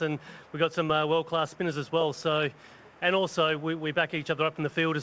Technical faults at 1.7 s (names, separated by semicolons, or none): none